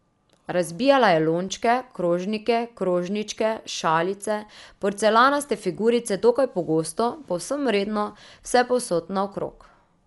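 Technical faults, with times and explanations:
Throughout, Dolby Digital compression: the speech sounds dull, with a fluttering noise around tones, likely from AC-3 coding at a rate fitting 64 kbps, filling starved frequency lines with dither noise. A spectrogram shows a ceiling at 11.5 kHz and grainy speckle between harmonics.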